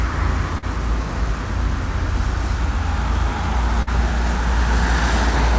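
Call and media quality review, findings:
Short concealed packet loss at 0.58 to 0.64 s and 3.82 to 3.89 s: brief smear, about 40 ms lost per event, jitter buffer concealment extrapolating prior sound. Filled with continuation, not silence, so no hard dropout. Audio tops out at 8 kHz, consistent with a G.722 call path.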